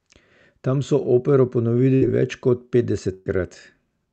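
A held, fading smear interrupts the speech at 1.95 to 2.09 s and again at 3.13 to 3.37 s, and each time the speech picks up further on. Both are bursts of packet loss. The receiver stretched the last sound it had while turning it down, for about 62 ms the first time and about 124 ms the second. Roughly 40 ms and then 120 ms of the speech went missing.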